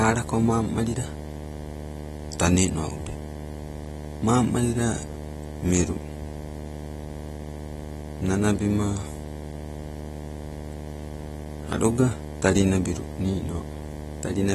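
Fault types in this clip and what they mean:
Video or display buzz: A buzz at 75 Hz, the field rate of a display or video signal leaking into the audio path, with a gritty hash riding above it. It sits fairly loud, only about 10 dB below the speech, and runs through the whole clip. Unlike mains hum, its fundamental is neither 50 nor 60 Hz, and it sounds rasping and harmonically rich rather than a smooth, steady tone.
AAC compression: The speech sounds dull and smeared, with a warbling, fizzy texture on sibilants and held sounds, and nothing above 12.5 kHz. This is likely lossy AAC-LC coding at a low bitrate, fitting roughly 32 kbps, where the coder drops high bands and coarsely quantises the rest. A plain low-pass filter would only darken the sound. Here the damage is plainly audible as that swirling, unstable texture as well.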